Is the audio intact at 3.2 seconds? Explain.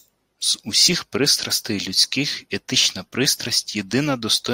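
Yes, the audio is intact at 3.2 seconds, with no dropout, click, distortion or other fault audible at that point.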